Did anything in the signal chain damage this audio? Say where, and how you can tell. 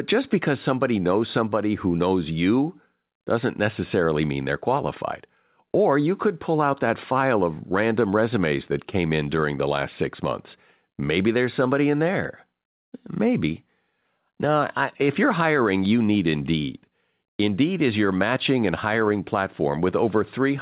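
No, nothing in this speech stood out on listening as damage from any stage of the chain, and the call path it travelled through, whose codec leaves nothing above 4 kHz, can be heard doing its ordinary job.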